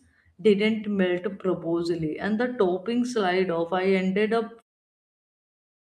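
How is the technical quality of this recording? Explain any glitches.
No glitches turn up in this speech recording, and the only thing worth noting is a smooth fade-out at the end that begins at roughly 4.5 s and reaches silence at 4.63 s, the gentle editor's kind with no hard edge.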